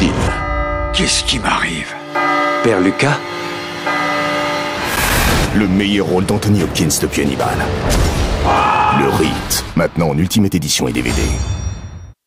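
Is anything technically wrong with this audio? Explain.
Yes. A loose connector crackle, where a worn contact makes and breaks intermittently, chops the signal into irregular scratchy bursts at 4.86 to 5.11 s and 7.27 to 7.44 s.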